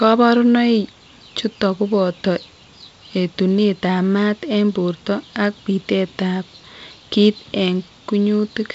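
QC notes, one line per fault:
No fault found, so there are no QC notes to log.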